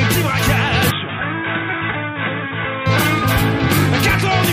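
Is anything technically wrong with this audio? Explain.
Yes. From 0.91 to 2.86 s the sound turns dull and boxy, with nothing above 3.8 kHz, drops around 5 dB, and gains a faint new noise floor, then clears. The likely cause is an input switched to a poorer device with a narrower band, with no gap at either switch.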